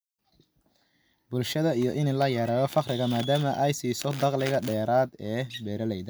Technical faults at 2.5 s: none

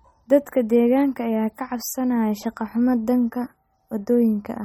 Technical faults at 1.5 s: MP3 compression

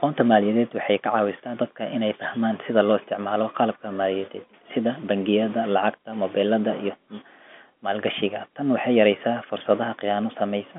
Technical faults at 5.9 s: none

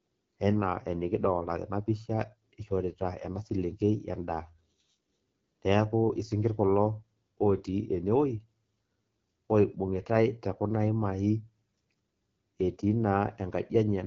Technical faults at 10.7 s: AMR wideband (HD Voice) codec

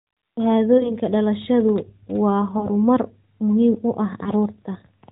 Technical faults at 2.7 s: lost AMR speech frames

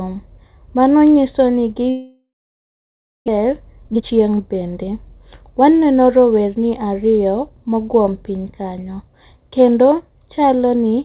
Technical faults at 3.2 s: long network dropout

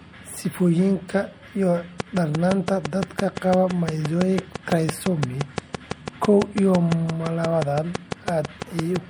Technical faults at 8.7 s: MP3 compression; train of clicks

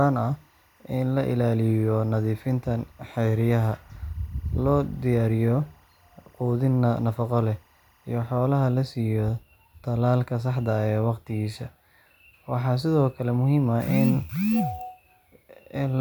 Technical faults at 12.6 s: none

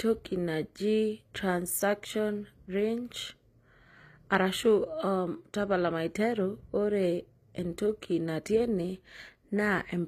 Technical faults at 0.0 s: HE-AAC compression

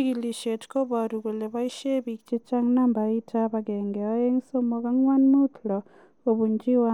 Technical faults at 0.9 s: none

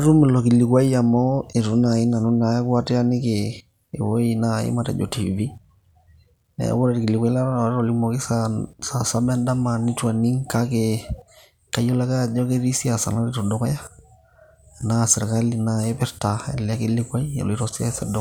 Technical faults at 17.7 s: none

